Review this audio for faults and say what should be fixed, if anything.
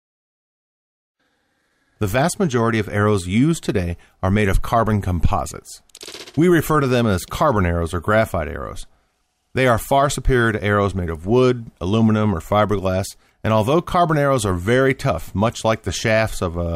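No faults were found; nothing needs fixing.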